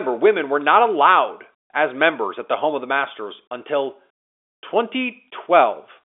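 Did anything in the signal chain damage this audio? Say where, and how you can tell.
No, nothing damaged it.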